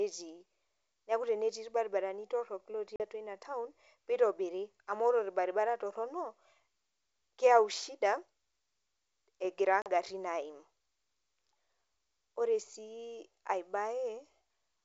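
Around 2.96 to 3.02 s, after "tenetii ilbaribarani torok", packet loss on an ADPCM call cuts a hard-edged hole of about 40 ms, roughly two packets. The decoder's predictor and step size drift out of sync with the sender's, so the speech comes back at "atua ina taon nitobiri" with some distortion. It settles within a few tens of milliseconds. The same thing happens again at 9.82 to 9.91 s, with another 40 ms gap.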